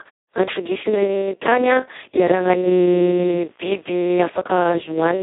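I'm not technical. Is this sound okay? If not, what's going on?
No. The whole clip carries heavy Speex codec damage. This older internet-call squeeze leaves the speech hoarse, grainy and partly robotic, with nothing above about 3.8 kHz. Unlike ordinary muffling, which just dulls the sound, this adds a buzzy, synthetic roughness to every syllable.

From 2.76 to 4.26 s a faint mains buzz joins in. It is a raspy hum from the 60 Hz power supply leaking into the recording. It sits steady underneath the speech, unlike the codec roughness, which moves with it.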